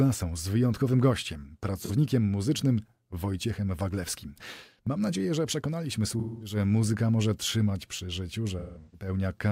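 At 1.82 s, after "z wyjątkowym gościem", a brief smeared, noisy patch of about 43 ms appears. From 6.19 to 6.56 s, between "nadzieję że przekonaliśmy" and "muzyka może trzymać przy", the speech goes phasey and decays before returning. From 8.59 to 9.08 s, after "może trzymać przy życiu", broken smeary dropouts are spread over about 340 ms, the longest near 150 ms. This is AAC frame loss with concealment: missing frames were rebuilt from the last good spectrum, fading as gaps lengthened.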